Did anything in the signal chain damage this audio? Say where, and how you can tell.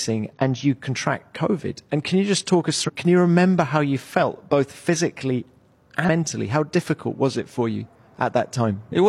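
Yes: damaged data in a compressed stream at 0.33–0.37, 2.84–2.90 and 6.04–6.09 s. Each is a brief codec blip where the decoder misreads corrupted frames and resyncs to the next header.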